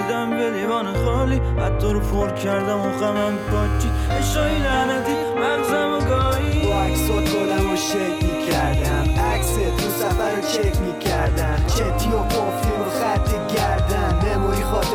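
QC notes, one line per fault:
1.89–3.09 s, GSM signalling bursts: galloping dit-dit-dit ticks and brief 217 Hz buzzes, roughly 25 dB below the signal, as the audio circuit rectifies a nearby phone's signalling bursts.
3.16–5.06 s, GSM phone buzz: a steady, hard, raspy 217 Hz buzz rich in harmonics, about 26 dB below the signal, from rectified radio pulses of a 2G phone in a call.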